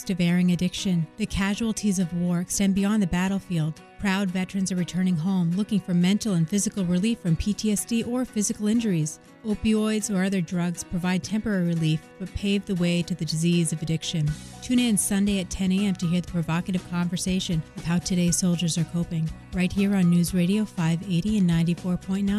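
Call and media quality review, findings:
No audible faults found in this recording.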